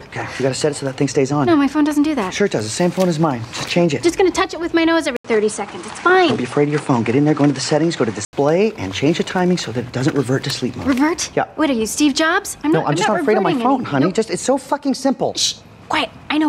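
From 5.17 to 8.33 s the audio turns duller, with nothing above 10.5 kHz, a new noise floor roughly 30 dB down and an 80 ms gap at the switch, while loudness holds steady. This likely comes from the input switching to a poorer device; a plain filter or codec change would leave no gap and add no fresh background noise.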